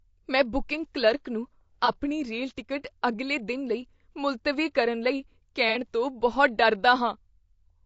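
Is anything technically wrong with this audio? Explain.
Yes. Throughout, the speech sounds rough and grainy, with a dulled top band. The likely cause is low-delay AAC compression at a low bitrate, around 32 kbps.

There is also AAC frame loss with concealment, at 1.85 to 1.93 s after "ਮੈਂ ਬੁਕਿੰਗ ਕਲਰਕ ਨੂੰ" and at 5.69 to 5.78 s before "ਤੋਂ ਬਹੁਤ". The decoder patched these gaps from the previous spectrum, so each one sounds like a brief smeared, noisy blur.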